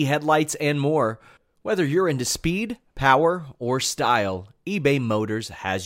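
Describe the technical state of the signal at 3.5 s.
Around 3.5 s the signal is intact, with no dropout, distortion or other fault audible at that point.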